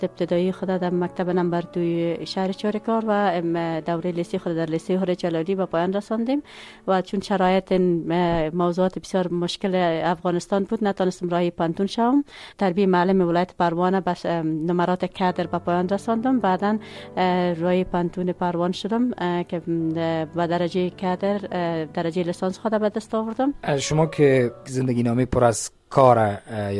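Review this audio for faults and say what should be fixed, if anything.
No faults turned up in this audio, so nothing needs to be fixed.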